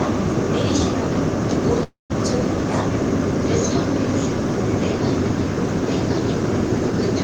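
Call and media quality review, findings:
Call audio freeze, 1.83–2.12 s: last sound stretched into a fading buzz or hiss, then about 150 ms of silence. Likely jitter buffer underrun from delayed packets. Playback resumes where it stopped, nothing lost, leaving latency about 264 ms longer.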